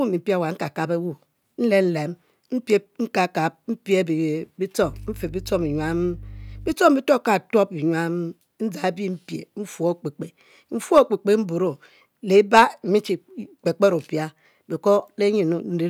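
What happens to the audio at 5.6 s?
At 5.6 s the speech carries mains hum, a steady 50 Hz tone with low harmonics running from 4.82 to 6.73 s and ending just before "bituob ka". It sits roughly 15 dB below the speech, consistent with power-line coupling through a ground loop or nearby transformer.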